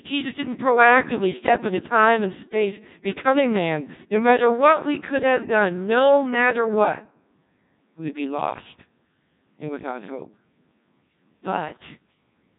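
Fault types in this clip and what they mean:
Codec 2 vocoder: The speech has passed through Codec 2, a very low-rate digital-radio vocoder that transmits only pitch, voicing, energy and a spectral envelope, then rebuilds the voice from summed sine waves instead of preserving the waveform. Damage here is heavy: the voice sounds robotic and buzzy throughout, with a coarseness that points to the 1.6 kbit/s mode, and there is no content above 3.8 kHz, leaving the speech narrow and dull.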